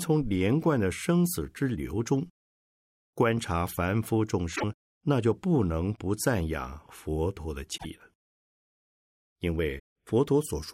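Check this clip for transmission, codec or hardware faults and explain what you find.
The speech has one recurring fault: damaged data in a compressed stream, at 4.53–4.64 s, 7.74–7.85 s and 9.76–9.80 s. Corrupted bytes there make the decoder misread frames and lose sync until it finds the next valid header. Each event is a brief garbled burst, seen as a short vertical smear on a spectrogram and a jagged break in the waveform.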